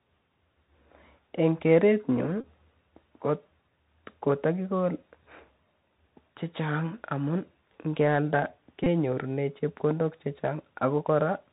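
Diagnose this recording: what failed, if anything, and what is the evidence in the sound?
Codec stage: the Bluetooth CVSD headset codec runs throughout. Nothing gets above 4 kHz, s sounds turn scratchy, and its one-bit, adaptive-step coding leaves a grainy hiss.

Network stage: Bluetooth headset packet repeats at 2.41–2.45 s and 8.84–8.87 s. Re-decoding the last good packet's bits every 3.75 ms gives a brief buzz near 267 Hz.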